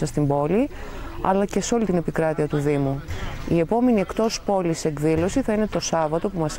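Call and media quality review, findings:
No technical faults found on the signal path; level, continuity and timing hold steady across the clip.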